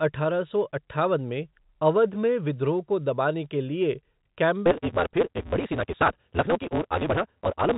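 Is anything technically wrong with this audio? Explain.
Yes. From 4.64 s to the end at 7.78 s there is a block size mismatch (truncated). One stage hands over blocks longer than the next stage reads, and the tail of each block is dropped. The cut repeats 172 times a second, which fits a 256-sample read, so a steady 172 Hz buzz sits under the speech. It also runs about 1.88 times too fast while keeping its timbre. The telephone band still stops at about 3.8 kHz throughout.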